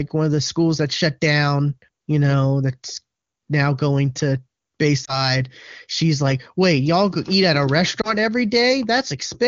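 At 5.05 s and again at 8.01 s, lost AMR speech frames: a single 20 ms frame fails, and the decoder's concealment produces a brief dip or warble before speech recovers.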